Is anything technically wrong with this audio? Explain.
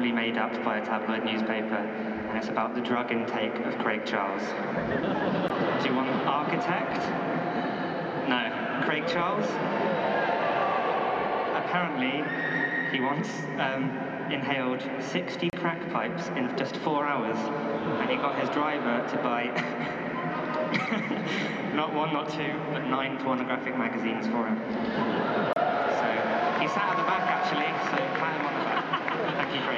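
Yes. There are gaps at joins of encoded pieces, roughly every 10 s: about 16 ms at 5.48 s, and 31 ms at 15.50–15.53 s and 25.53–25.56 s. Separately encoded pieces were joined untrimmed, keeping encoder delay and padding. Continuous sound drops out briefly, with smeared edges, then resumes.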